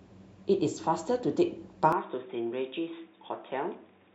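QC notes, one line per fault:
1.93 s to the end, input switched to a poorer device: from 1.93 s the speech abruptly turns dull and boxy, with nothing above 3.8 kHz, a level about 5 dB lower and a faint new background hiss, and no silence at the change. The likely cause is the recording moving to a second, narrower-band microphone or a headset call profile, whose limited bandwidth, own tone and own noise floor replace the original pickup.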